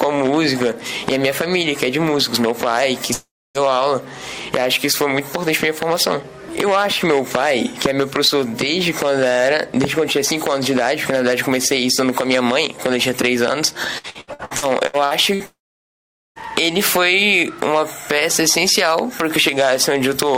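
At 3.13 s the sound smears into a short fading buzz and then goes silent for about 0.29 s before resuming at 3.58 s, with roughly 0.42 s of audio simply gone. This is likely a long network dropout, where the receiver briefly extends the last sound and then has nothing left to play.

From 13.98 to 15.43 s the audio turns choppy, broken by nine short holes, the longest 68 ms. This is repeated packet loss (robotic sound). Packets kept failing to arrive, and about a third of the stretch is patched-over filler rather than real signal.

Right after, from 15.46 to 16.39 s, the same fade-then-silence pattern returns. A likely long network dropout takes out about 0.9 s, roughly 0.81 s of it dead quiet, and the audio rejoins without the lost portion.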